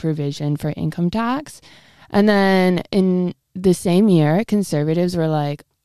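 Nothing goes wrong anywhere in this bit of speech, so there's no fault to point to at any moment.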